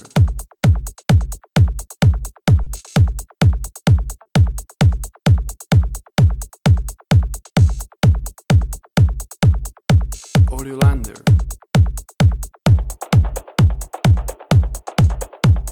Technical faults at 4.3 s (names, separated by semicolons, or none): clock drift between sender and receiver; short stall from a late packet